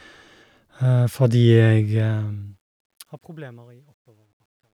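Truncation distortion on a fade runs from 1.91 s to 4.78 s. As the speech fades out from around 2 s, the level stage drops low bits without dither, which fits a 12-bit path. Between 3.27 s and 4.78 s the quiet tail turns gritty.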